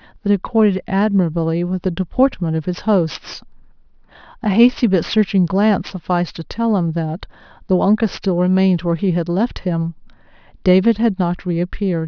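Right from the start and all the way through, the speech carries aliasing. Content above a fold point of 5.5 kHz wasn't filtered out before the rate came down, which fits a drop from 24 kHz to around 11 kHz sampling, so it mirrors back down as unrelated tones. It sits roughly 25 dB under the speech, enough to make the sibilants gritty and metallic, and the spectrum runs hard up to that 5.5 kHz edge.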